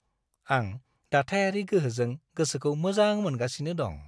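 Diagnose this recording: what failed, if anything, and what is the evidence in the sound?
Nothing failed; no fault is audible in the recording.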